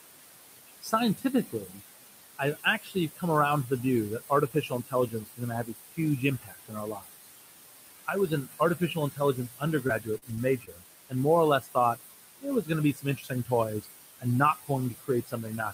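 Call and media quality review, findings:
Noise suppressor artifacts, throughout: background floor pulled down by about 19 dB between phrases, then rising under speech. Spectrogram: pumping noise floor, isolated flickering time-frequency specks. The room noise sits about 10 dB under speech.

Speech cut by the noise suppressor: 0.82–1.81 s, about half a second lost. 2.35–3.71 s, just before "the view that", under half a second. 4.29–7.27 s, just after "the view that", roughly 1.5 s. 8.06 s to the end. Drops of about 16–21 dB. The suppressor misclassifies soft consonants and quiet passages as noise and attenuates them. Waveform: envelope dips mid-phrase. Spectrogram: high-frequency consonant energy blanked.

Repeated packet loss (robotic sound), 9.87–10.69 s: a cluster of short dropouts, the longest 39 ms, about 100 ms missing in total, with about a tenth of the span patched by concealment. 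The jitter buffer or decoder extends the last frame into each gap, giving a choppy sound with pieces missing. Spectrogram: smeared, repeated harmonic blocks with brief vertical gaps.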